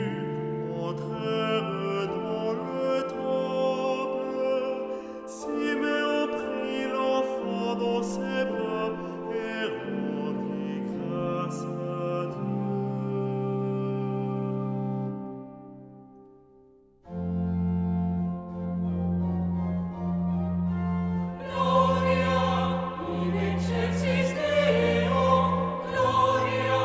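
No technical faults can be heard at any point in the audio, so there is nothing to describe in time order.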